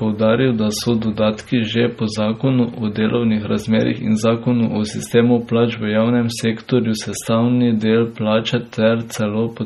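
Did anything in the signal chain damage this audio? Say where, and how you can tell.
Yes. The codec stage likely did the damage: heavy MP3 compression, which fits a low bitrate near 32 kbps. Throughout the speech, weak frequency lines drop in and out frame by frame, giving a watery, swirly texture and smeared attacks. Nothing sits above 21.1 kHz.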